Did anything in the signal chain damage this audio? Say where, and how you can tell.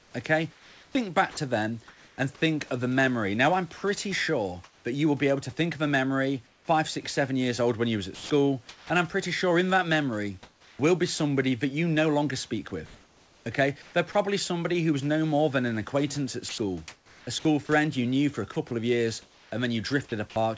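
Yes. In the first 1.37 s, comfort noise replaces the background. About 0.6 s of it sounds steady and featureless, not like the live room tone. This is likely discontinuous transmission in call processing, with the receiver synthesising noise during pauses.

Sound dropped by the voice detector occurs from 1.31 to 1.37 s. About 40 ms of real sound vanishes into that same flat noise. The sender's detector likely mistook the quiet sound for background and stopped sending, so the receiver filled the 60 ms gap.

Sound chopped by the voice detector appears from 3.77 to 14.15 s and from 16.49 to 20.36 s. About 1.4 s and 1.0 s are swapped for synthetic fill, likely as the detector toggles transmission repeatedly. The call codec's band limit, with nothing above 8 kHz, fits G.722 at 64 kbps.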